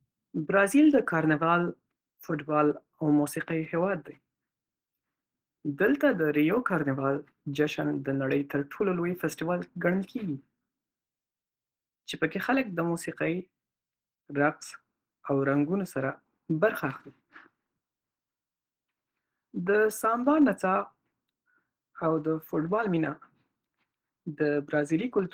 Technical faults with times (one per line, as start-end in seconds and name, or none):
none